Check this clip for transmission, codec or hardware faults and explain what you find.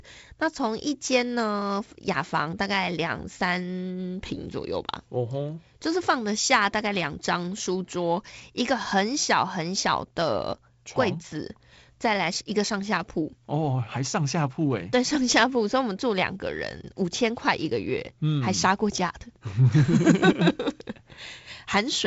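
No faults found: the speech comes through G.722 wideband coding, with nothing above 7.7 kHz and a slight added roughness consistent with its 48 kbit/s mode.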